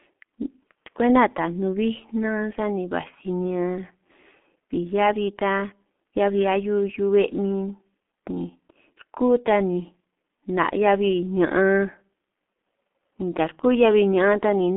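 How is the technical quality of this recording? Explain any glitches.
Pretty rough, honestly. The whole recording has gone through a heavy G.723.1 codec pass from start to finish. Here's what's happening. This old telephony codec chops the speech into 30 ms frames and rebuilds each one from a coarse voice model at a very low rate. The sound fits roughly 6.3 kbit/s. It also sits on a phone line passing only about 200 Hz to 3.4 kHz, with nothing above 3.6 kHz. So it sounds muffled and hoarse, and the consonants smear together.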